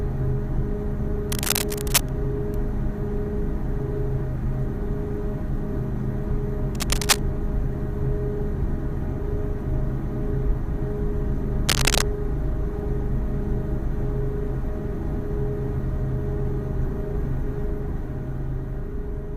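Three bursts of scratchy, crackling noise sit right on top of the sound: from 1.30 to 2.09 s, from 6.75 to 7.21 s, and from 11.66 to 12.04 s. Each is dense and uneven, roughly as loud as the audio itself. That's cable scratch noise, most likely a worn lead, connector or control being moved, with its contact resistance jumping around and spraying irregular noise into the signal for a moment.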